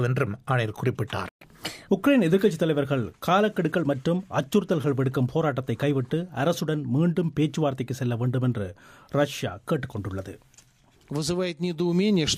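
At 1.29 s the sound cuts out abruptly in mid-flow. Silence lasts about 120 ms, until 1.41 s. This is a playback stall. The player most likely ran short of buffered data, or its thread was briefly blocked. Either way, nothing reached the output. Then the sound returns. The gap is short but clearly audible as a hole in the audio.

From 1.41 s to 1.89 s there is catch-up at higher speed. The player works through its backlog by resampling at 1.25 times normal speed. Because speed and pitch are tied together here, everything rises in pitch by about four semitones. The passage sounds hurried. At 1.89 s the lost time is recovered. Speed and pitch then drop back to normal.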